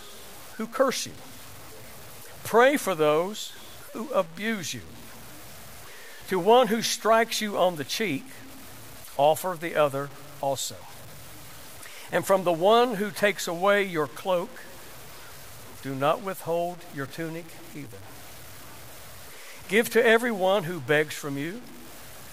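Throughout the speech, a grainy distortion roughly 25 dB below the level of the speech follows the signal. This is likely low bit depth without dither, consistent with about 7 bits and plain truncation. Unlike steady hiss, the grit tracks the sound, roughening quiet passages and falling silent or sputtering in pauses.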